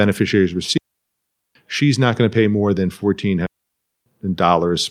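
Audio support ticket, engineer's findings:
Digital wireless dropout at 0.78–1.55 s and 3.46–4.06 s. Clean near-silent holes, about 0.78 s and 0.60 s long. Receiver muting on data loss. No noise bursts.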